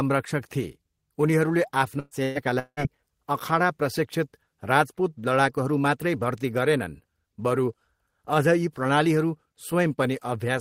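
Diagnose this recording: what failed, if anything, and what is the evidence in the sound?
The network stage suffered two bursts of packet loss, at 1.99 to 2.14 s and 2.23 to 2.38 s, each taking out about 120 ms of speech. The receiver's concealment extended the last sound into a fading buzz or hiss, then speech picked up further on with that piece missing.

A longer break from 2.59 to 2.80 s was likely a long network dropout, with about 180 ms of speech never delivered. The concealed tail fades away over most of the gap and gives way to a brief silence before speech returns, skipping the lost stretch.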